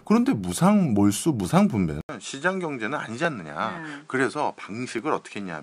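A brief loss of likely dropped samples, well under a millisecond each, makes the speech waveform jump to a later value at 0.52 s, then again at 3.25 s and 4.99 s. Each is heard as a single sharp click, too short to remove any sound.

At 2.01 s the recording likely switches its input to a poorer device, which leaves 80 ms of silence. From there to the end the sound passes through a narrower band, so the speech turns duller, drops a few decibels in level, and gains a new, faint background noise some 35 dB beneath it.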